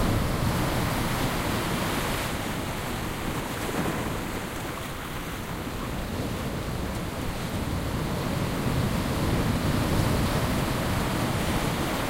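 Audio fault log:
No technical faults can be heard anywhere in this recording of sounds; the signal stays continuous and stable throughout.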